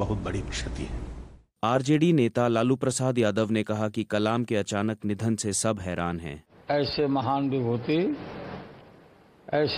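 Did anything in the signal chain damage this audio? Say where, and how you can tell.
Yes: faint clock slip clicks tick about every half second from 0.16 to 9.42 s, likely a converter clock mismatch near 50 ppm. Their steady spacing and tiny size distinguish them from buffer dropouts.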